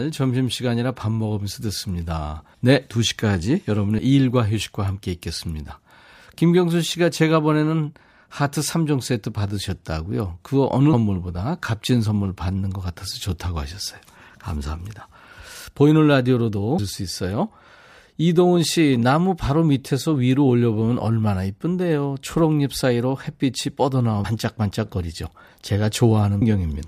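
At 3.98 s and again at 26.42 s, compressed frames are skipped. Whole 32 ms frames never play, so the speech jumps ahead by about 70 ms, then about 200 ms. A spectrogram shows an abrupt vertical seam.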